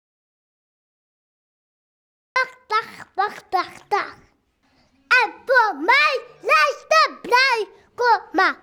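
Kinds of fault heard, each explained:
Audio dropout to silence: from the very start until 2.36 s the clip holds complete silence, with no room tone or background at all, and the sound then begins abruptly as if already mid-flow. The likely cause is that the input was lost, perhaps through a disconnected device, a failed link or a mute, while the recorder kept writing silence, so whatever happened during those first seconds is absent.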